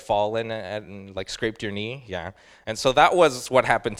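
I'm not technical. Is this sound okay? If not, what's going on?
Yes, nothing in the audio indicates a technical fault.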